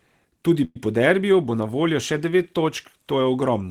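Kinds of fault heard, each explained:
Call audio freeze: Packets were likely held up in transit, draining the jitter buffer. From 0.64 to 0.76 s the last speech sound is stretched into a fading buzz for about 110 ms, ending in roughly 20 ms of silence. Speech then resumes intact at "po derbiju bo na", just delayed.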